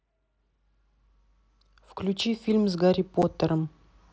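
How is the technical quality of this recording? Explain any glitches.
One glitch stands out in the speech, heard over a wideband mSBC Bluetooth headset link. At 3.22 s, unconcealed Bluetooth headset packet loss drops about 7.5 ms of audio, which fits a single lost packet. Silence or an idle pattern fills the gap, leaving an abrupt hole instead of the smoothed or repeated fill of concealed loss.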